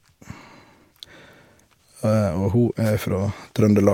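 A speech recording with a wireless microphone noise hit from 2.85 to 2.91 s, a 60 ms swish of static over the voice. The analogue FM radio link briefly faded as reflected signals cancelled, letting receiver noise rise above the weakened carrier.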